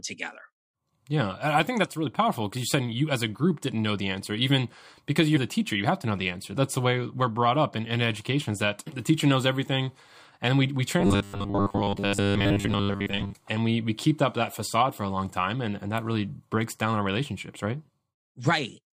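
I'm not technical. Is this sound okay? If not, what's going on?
No, there's a problem from about 11.00 to 13.35 s, right after "we we": the speech turns into a stiff, metallic buzz, a robotic sound from repeated short buffers. It's likely that audio was arriving too slowly, so the software kept replaying a tiny slice, about 10 ms, for most of that stretch instead of the real sound. Those repeats add a flat 100 Hz buzz that still roughly follows the talking.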